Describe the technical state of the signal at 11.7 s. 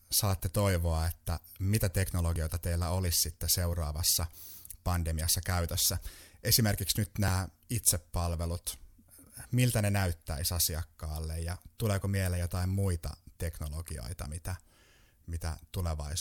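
At 11.7 s the speech signal is intact, with no dropout, clipping, distortion or other technical fault present.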